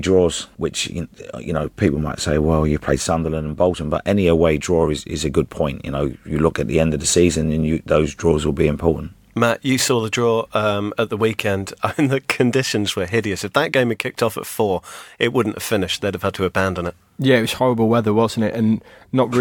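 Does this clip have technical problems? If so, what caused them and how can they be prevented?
No, the signal shows no technical faults at any point, so there is nothing here that needs a cause traced or a prevention step.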